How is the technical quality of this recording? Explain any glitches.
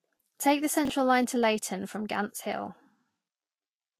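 The quality is compromised: there's plainly audible codec damage throughout, plus one brief jumbled glitch near the start.

The whole clip sounds hissy and grainy, with nothing above 14.1 kHz and softened consonant attacks. That's likely Vorbis compression at a low bitrate, something like 32 kbps, where the treble gets quantised so coarsely that fine detail turns into noise-like grit.

Around 0.85 to 0.90 s there's a quick garbled stutter, which is chunks out of order. A roughly 21 ms chunk of audio landed one chunk late, so it plays after its neighbour instead of before it, creating three hard joins.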